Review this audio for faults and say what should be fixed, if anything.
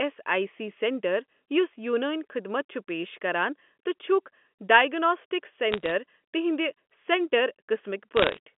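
Bit errors on a digital phone line appear as two short bursts of crackle, from 5.72 to 5.91 s and from 8.16 to 8.38 s. A flipped bit corrupts a single sample in the G.711 mu-law stream, and when it hits the sign or an upper bit the sample jumps, giving a sharp tick. With well under one percent of bits affected, the ticks are scattered over the speech, which carries on intact in its normal telephone band of about 200 Hz to 3.4 kHz. That sets them apart from packet loss, which mutes or smears whole stretches instead of dotting them with clicks. Preventing this means fixing the noisy transmission link or adding error detection and correction on the line.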